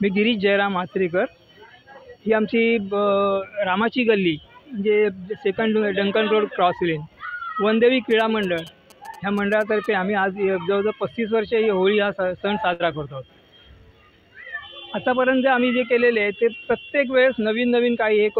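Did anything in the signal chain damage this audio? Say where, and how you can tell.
Yes. From 8.11 to 9.86 s a galloping pattern of short buzzes sits well below the sound. These are GSM signalling bursts: a nearby 2G phone's radio pulses, repeating at about 217 Hz, are rectified in the analogue wiring and demodulated into the audio.

At 12.73 to 12.82 s a burst of packet loss in the network shows up as a held, fading continuation of the preceding sound. The receiver's concealment stretched the last audio over about 61 ms before playback resumed, with roughly 60 ms of the original missing.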